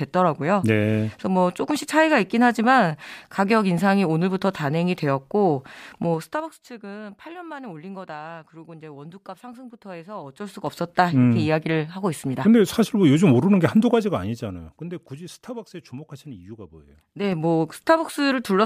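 Speech with zipper noise during four level moves of around 15 dB: down at 6.06–6.66 s and 13.74–15.19 s, up at 10.16–10.84 s and 16.90–17.41 s. The gain jumps in 1 to 3 dB steps about ten times a second, leaving an audible ticking where a smooth fade would glide silently.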